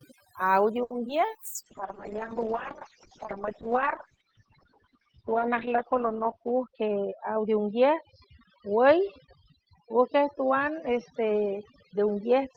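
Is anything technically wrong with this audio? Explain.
Yes, there's quite a bit going on here, and it piles up over the course of the speech.

The overdone noise removal runs the whole way through. The noise reducer was set so aggressively that it drops individual frequency bands almost to nothing whenever they look like its noise estimate, and the softer parts of the voice get caught too. That leaves a near-dead background with little twinkling specks in it.

Right near the start, from 0.83 to 0.92 s, there's a short stall from a late packet. A packet didn't show up on time, the jitter buffer ran dry, and the receiver held the last bit of sound for about 70 ms until it arrived, then carried on from the same spot. Nothing is lost, but you hear a sound dragged out a touch too long, and the delay grows by about 70 ms from there.

Just after, at 1.08 to 1.11 s, comes a short concealed packet loss. 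Around 20 ms of audio never made it to the decoder, and the receiver patched the gap by extending what came before and then blending back into the real signal. It's a quick smear or wobble, and a brief sound can go missing in it.

From 1.57 s to the end there's a call bitrate drop. The bandwidth estimate fell and the encoder was pushed way down. It sounds consistent with going from about 32 kbps to about 7 kbps, sitting at the bottom for about 4.2 s. At that rate it codes coarsely and trims the top end, with the cut-off falling from 20 kHz to about 6 kHz, so everything turns rough and muffled.

Finally, from 6.39 to 7.30 s, there's a jitter buffer speed-up. The buffer had more audio queued than it wanted, so the receiver snipped out tiny pitch-period chunks repeatedly, around 70 ms in total. The speech plays about 8% fast at the same pitch and feels a bit hurried through that stretch.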